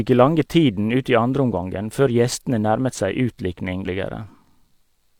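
Speech that jumps ahead at 3.82 s, losing about half a second. This points to compressed frames skipped: roughly fifteen frames, consistent with 42.7 ms frames, missing or rejected by the decoder.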